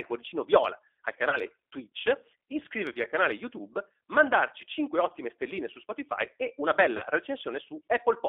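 From start to finish the speech sounds narrow, slightly rough and synthetic, confined to roughly 300 Hz to 3.6 kHz. This is the G.729 codec at 8 kbit/s, which rebuilds each 10 ms frame from a vocal tract filter, a pitch predictor and a few pulses rather than the actual waveform, so fine detail is replaced by a coarse approximation.

At 1.29 to 1.40 s, 2.92 to 3.00 s and 6.97 to 7.07 s the sound briefly smears into a stretched buzzy tone or coloured noise that sags in level and stays weak for a moment afterwards. These are VoIP packet loss events concealed by the speech codec. About 30 ms of audio goes missing each time, and the decoder fills the gap by extending its last pitch and filter with falling gain. Because each frame builds on the one before, recovery trails past the gap itself.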